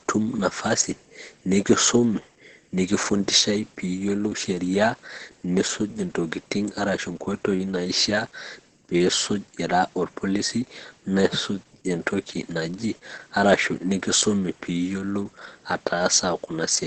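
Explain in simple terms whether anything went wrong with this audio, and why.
The audio was squeezed hard by Opus voice compression for the whole clip. The coder was given very little data to work with, so it kept only the lower part of the sound, cutting everything above about 8.4 kHz, and rebuilt the rest from a rough approximation in 20-millisecond slices. To the ear, the speech sounds muffled and dull, with a hoarse, grainy edge and a slightly robotic quality.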